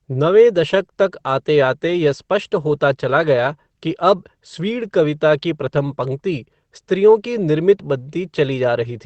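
Nothing stood out on listening to this speech recording, which carries the ordinary character of a WebRTC call path using Opus.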